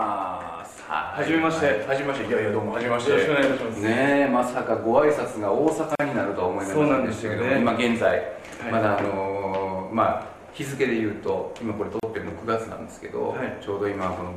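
Separately encoded pieces were joined untrimmed, leaving encoder delay and padding in. This causes a gap at a join of encoded pieces: a short silence at 5.95 s (43 ms) and 12.0 s (34 ms), six seconds apart, before the sound resumes.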